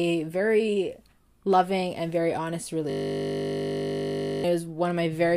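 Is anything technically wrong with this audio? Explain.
Yes. A system hang loop occurs from 2.9 to 4.44 s, just after "loving and very honest". The system stalled while the sound hardware kept replaying one 20 ms buffer slice. This produces a steady 50 Hz buzz in place of about a second and a half of speech.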